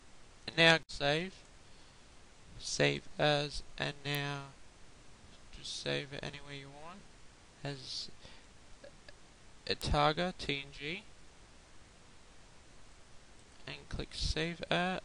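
An electrical switching spike lands at 4.15 s and again at 9.82 s, each a sharp snap or tight cluster of clicks on top of the sound. The second is a little louder, peaking around -20 dBFS against roughly -25. A nearby switch or motor arcing into the audio line is the likely cause.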